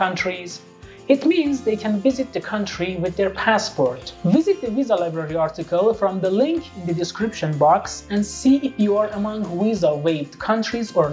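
No technical faults can be heard in this clip.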